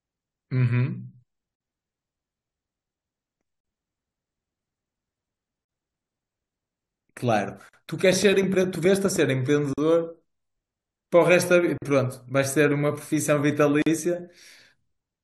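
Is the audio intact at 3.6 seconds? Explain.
No, there's a gap at a join of encoded pieces from 3.60 to 3.65 s. Untrimmed encoder padding leaves a 43 ms hole in the speech.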